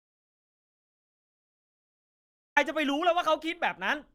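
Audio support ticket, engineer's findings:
Audio dropout to silence, 0 to 2.57 s, already under way at start; dead silence, no room tone. Likely input loss upstream, recorder kept writing. Speech starts after.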